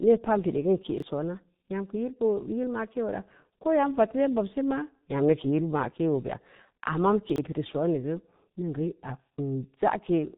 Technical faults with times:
0.00-10.38 G.723.1 codec
0.98-1.02 chunks out of order
7.30-7.38 chunks out of order

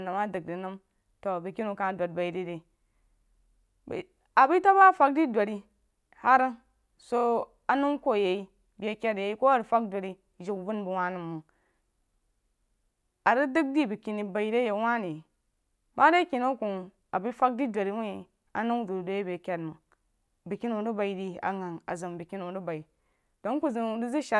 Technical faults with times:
none

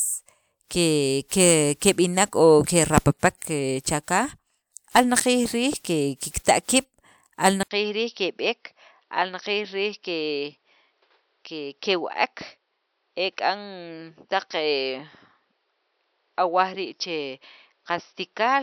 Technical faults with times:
7.63-18.62 input switched to a poorer device

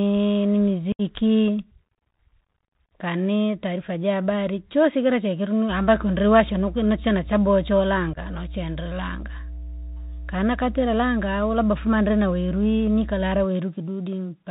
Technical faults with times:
0.00-14.51 Bluetooth CVSD headset codec
0.92-1.01 unconcealed Bluetooth headset packet loss
8.13-8.18 unconcealed Bluetooth headset packet loss

